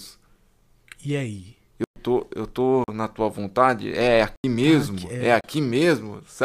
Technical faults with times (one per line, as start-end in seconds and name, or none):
1.84-1.96 block of digital silence
2.84-2.88 block of digital silence
4.36-4.44 block of digital silence
5.41-5.44 block of digital silence